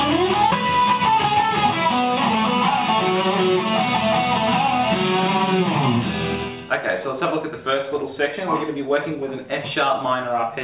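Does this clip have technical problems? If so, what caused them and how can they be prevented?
Yes. At 0.52 to 0.54 s there is a skip ahead: roughly 0.7 s of audio was dropped while later audio already waited, so playback jumps straight across with no gap or fill. This sets it apart from a dropout, which leaves silence or concealment noise. Keeping the jitter buffer from overflowing, for example by giving it more headroom before bursts arrive, prevents this.

From 0.62 to 2.72 s there is a jitter buffer speed-up: the receiver held more audio than it targets and repeatedly removed pitch-period-length pieces, about 150 ms in total, so the sound runs at 107% speed at unchanged pitch. A resampling error would shift the pitch as well. Smoother network delivery, which avoids packets arriving in clumps, prevents this.

The band limit at 4 kHz is simply the narrowband G.711 call codec.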